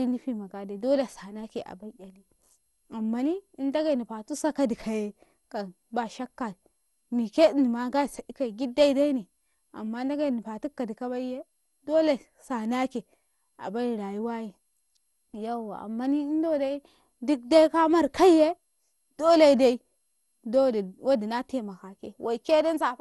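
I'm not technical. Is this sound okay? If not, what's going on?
No. Generation loss runs through the whole clip, from start to finish. The speech sounds swirly, smeared and hollow, consonants lose their crispness, and nothing above about 11.9 kHz remains. This is likely from the recording being compressed and decompressed again and again, something like seven times, with an older broadcast-style format. Each round slices the sound slightly differently and throws away a bit more, so the damage piles up.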